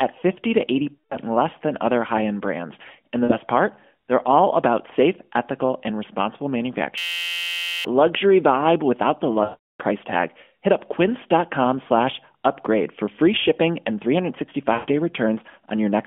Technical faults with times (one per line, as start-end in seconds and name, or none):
0.95-1.16 lost AMR speech frames
3.24-3.37 lost AMR speech frames
6.98-7.85 system hang loop
9.44-9.82 lost AMR speech frames
14.74-14.90 lost AMR speech frames